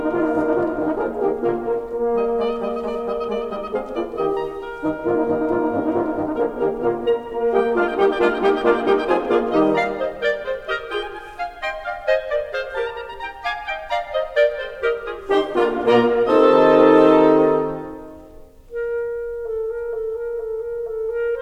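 Music, with no technical fault to report. Nothing goes wrong at any point in the clip.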